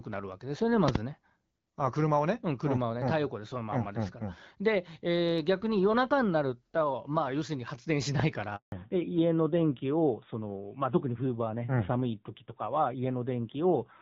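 At 0.88 to 0.98 s two loud pops land in quick succession, peaking about 20 dB above the speech, which continues underneath. They are likely voltage steps from a plug, switch or static discharge, shaped into sharp clicks by the downstream circuitry. A single loud pop of similar level, likely from the same kind of cause, follows at 8.2 s. From 8.56 to 8.72 s a handover gap cuts the speech to silence for 160 ms, consistent with the call switching networks while no speech frames arrived, so that stretch is lost. From 8.72 s to the end, fallback to narrowband removes everything above 4 kHz. The sound turns duller and rougher than the earlier wideband section, which points to a move from HD Voice near 12.65 kbit/s to a narrowband codec around 7.4 kbit/s.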